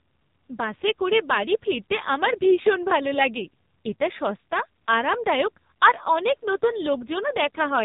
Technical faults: AMR narrowband mobile codec

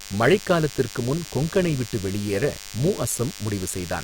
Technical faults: DECT cordless phone buzz

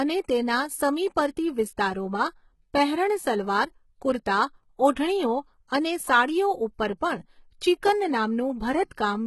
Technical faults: HE-AAC compression

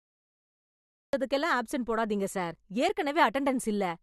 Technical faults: cut-off start

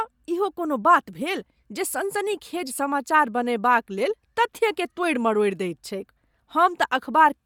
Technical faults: Bluetooth LC3 compression

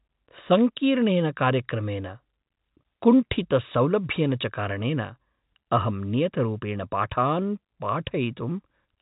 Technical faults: none

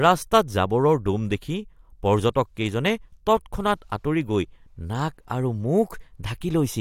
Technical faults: none

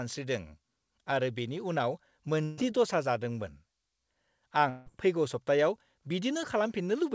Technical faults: burst of packet loss; long network dropout

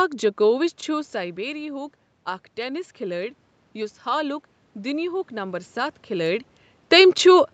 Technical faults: automatic gain rising

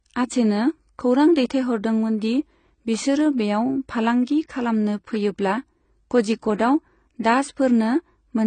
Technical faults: AAC compression; pre-echo

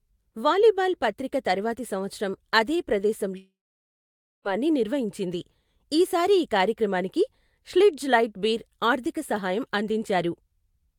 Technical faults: long network dropout

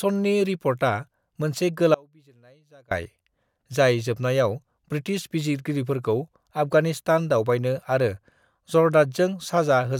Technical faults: audio dropout to a faint residue

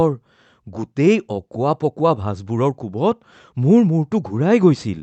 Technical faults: clock drift between sender and receiver; repeated timing corrections

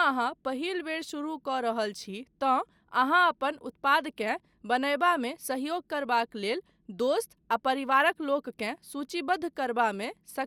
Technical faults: none

